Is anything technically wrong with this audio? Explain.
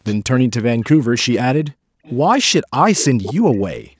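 Yes, there are two kinds of fault.

Echo leak: brief delayed copies of the speech return at 0.04–0.16, 0.59–0.63, 1.17–1.23, 2.03–2.14, 3.23–3.34 and 3.53–3.61 s, each trailing its source by about 338 ms. The likely cause is a loudspeaker at the far end whose echo canceller let part of the microphone pickup slip through and be sent back. Most scraps are faint, roughly 25 to 35 dB below the speech. The one at 3.23 s is much stronger, only about 10 dB down.

Background gated by the echo canceller: from 3.93 s to the end, roughly the last 70 ms, the room sound suddenly falls away by as much as about 40 dB. While playback was active, the canceller clamped the microphone hard to suppress echo, and the ambience was cut along with it. The result is an abrupt near-silent hole in place of the steady background.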